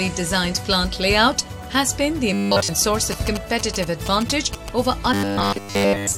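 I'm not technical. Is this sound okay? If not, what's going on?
No. From 2.33 to 2.68 s and again from 5.14 to 6.17 s there is robotic sound from repeated short buffers: a rigid, metallic 100 Hz buzz. It is likely caused by audio arriving late, with the software replaying the same 10 ms slice over and over.

From 3.12 to 4.69 s there are GSM signalling bursts, a galloping dit-dit-dit of short buzzes with a 217 Hz tone, caused by a nearby 2G phone's radio signal leaking into the audio circuit.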